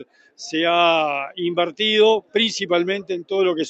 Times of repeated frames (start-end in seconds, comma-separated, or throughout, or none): none